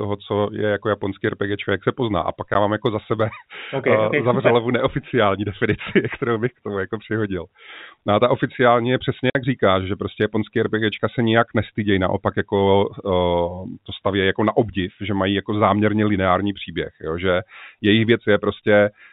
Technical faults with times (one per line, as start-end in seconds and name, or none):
2.54 packet loss filled with silence
9.30-9.35 packet loss filled with silence